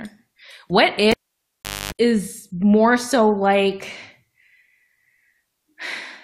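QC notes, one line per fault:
1.11–1.93 s, cable pulled and plugged in: a pop at 1.11 s as the live connection breaks, then the speech drops to near silence for about 0.76 s. While the plug is pushed back, only the tip makes contact before the shield does, leaving the input floating and picking up a 50 Hz mains buzz lasting about 0.25 s. A second pop at 1.93 s marks full contact, and the speech resumes.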